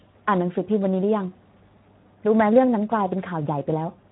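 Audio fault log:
Throughout, Speex codec damage: the speech sounds plainly noisy and hoarse, as this CELP coder has too few bits to model the excitation behind each sound. The coarseness fits a low Speex setting, roughly 11 kbps.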